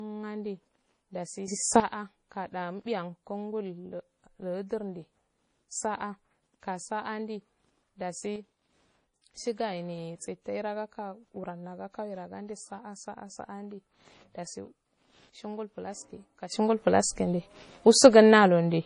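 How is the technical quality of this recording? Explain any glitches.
Technically it's fairly rough: the whole thing has a dull, band-limited quality, and the level lurches around three times.

Throughout, the speech stops dead at about 10.6 kHz, with the smeared, watery texture of a heavily squeezed MP3. It's likely low-bitrate audio saved at a high bitrate: an early pass around 32 kbit/s stripped the top end and left its artefacts, and the later high-rate MP3 encode just preserved that damage.

There are also three sudden gain jumps, each likely an unramped digital gain change that moves the speech and the noise floor together. From 1.48 to 1.80 s everything leaps up by about 12 dB. From 8.36 to 9.36 s it drops by about 6 dB. Then at 16.52 s it jumps up by about 14 dB and stays there to the end.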